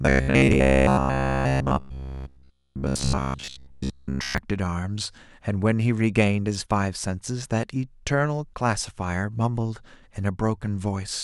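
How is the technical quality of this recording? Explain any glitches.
The first four seconds are damaged. From 0.02 to 4.38 s there is robotic sound from repeated short buffers. Audio likely arrived too slowly, so about 15 ms chunks were replayed. Most of the speech in this span becomes a rigid 66.7 Hz metallic buzz.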